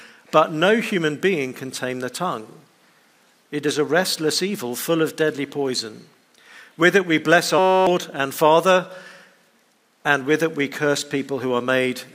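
At 7.58 s a system hang loop takes over until 7.87 s. The machine stalled while the audio hardware kept replaying one tiny slice of its ring buffer. Each pass lasts 5.33 ms, which fits a 256-sample buffer, so the repeats fuse into a steady, pitched buzz at 188 Hz rather than a stutter. That exact, rigid repetition sets it apart from a plain dropout or random crackle. Roughly a third of a second of real audio is lost.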